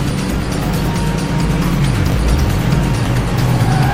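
At 2.10 to 2.14 s, two 20 ms chunks of audio play in swapped order: one chunk was delivered or written a single chunk late, so it lands after the chunk that should follow it. Nothing goes missing, but the sound jumps forward, back, and forward again across three hard joins. The result is a brief jumbled stutter of about 40 ms.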